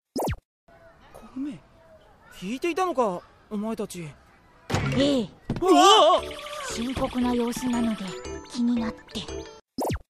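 No technical faults can be heard anywhere in the recording. There is nothing here that needs a timestamp or a fix.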